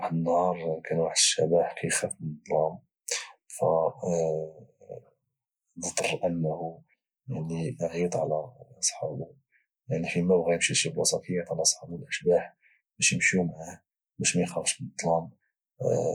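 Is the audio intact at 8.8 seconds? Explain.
Yes, at 8.8 seconds the speech plays through intact, with no dropout, click, distortion or other fault.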